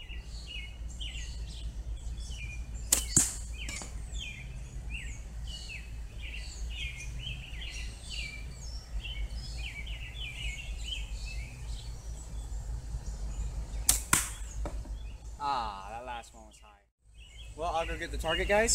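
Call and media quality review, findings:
No audible faults found; no action required.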